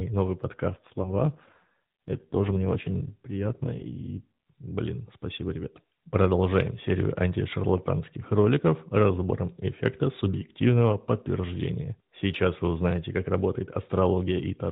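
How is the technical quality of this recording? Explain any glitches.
The recording carries one glitch, heard through a narrowband mobile link that passes nothing above 4 kHz and leaves the AMR-NB codec's light coloration on the speech.

From 0.68 to 4.26 s, just before "блин спасибо ребят", the speech turns rougher, buzzier and more synthetic, with no gap and no change in bandwidth. This is an AMR rate drop. The network pushed the codec to a lower mode to protect against a weak radio link. The sound fits a step from 12.2 down to 5.9 kbps. Clarity returns when the rate recovers.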